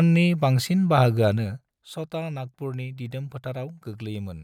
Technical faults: zipper noise

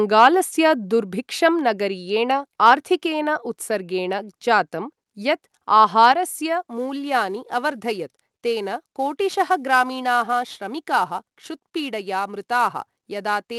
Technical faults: microphone volume stepped down; sample clock jitter

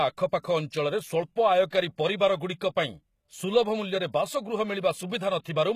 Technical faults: HE-AAC compression; pre-echo

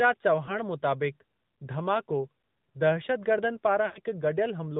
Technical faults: AMR narrowband mobile codec; lost AMR speech frames

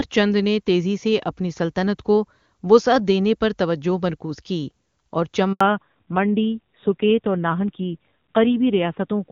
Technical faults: handover gap; fallback to narrowband

